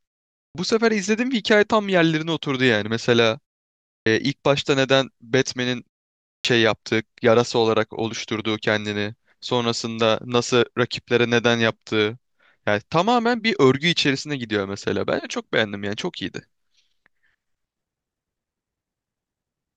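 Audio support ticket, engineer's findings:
Clipped start after a pause at 0.48 s, 3.99 s and 6.38 s: onsets cut abruptly from silence, about 67 to 73 ms lost each time, after gaps of 0.48 to 0.61 s. Probable component: output device sleeping during silence, slow to wake and relock.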